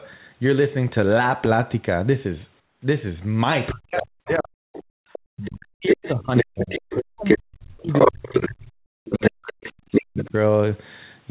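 Comfort noise in place of the background, 2.60 to 2.82 s: for about 220 ms the real room sound gives way to a smooth, featureless hiss about 9 dB quieter, with none of the earlier texture. The likely cause is discontinuous transmission: the sender's voice detector judged the moment silent and stopped sending, and the receiver filled the gap with synthetic noise roughly matched to the background's spectrum.

Speech suppressed in double talk, 3.72 to 4.58 s: the talker's level collapses in patches over roughly 0.7 s, at worst by around 40 dB, so the voice dips and breaks apart. This is likely the echo canceller failing to tell the near talker from loudspeaker echo while both sides spoke, and attenuating everything together.

Other side's voice leaking through, 4.27 to 7.37 s: a second voice runs under the talker for about three seconds at much the same loudness. It is consistent with sound from the far end replayed on the talker's loudspeaker and picked up again by the microphone, likely because the echo canceller left that residual in place.

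Background gated by the echo canceller, 4.86 to 5.04 s: the room tone drops out abruptly by about 40 dB for roughly 200 ms, then snaps back. The canceller clamped the microphone hard while the loudspeaker was active and released it afterwards, producing a brief hole in the ambience.

The double-talk suppression returns from 5.32 to 10.35 s, with around four seconds of chopped, ducked speech and drops of roughly 40 dB. The leaking voice reappears at 7.92 to 8.49 s and 9.10 to 10.28 s, again near speech level. All of this sits within a narrowband call path with nothing above 4 kHz, which fits a G.711 telephone codec.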